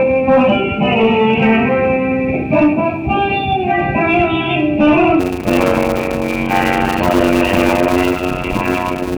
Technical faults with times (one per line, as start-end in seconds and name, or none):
5.19-9.17 block size mismatch (padded)